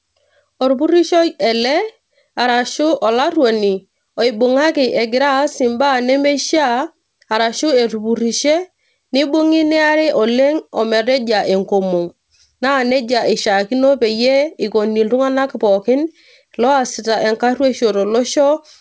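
Nothing goes wrong anywhere in this speech clip; it's simply come over a call line whose codec tops out at about 8 kHz, as you'd expect from a wideband G.722-style link, and no faults appear along the way.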